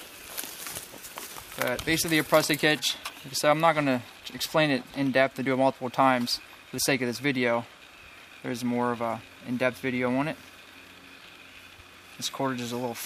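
No technical faults can be heard anywhere in this clip.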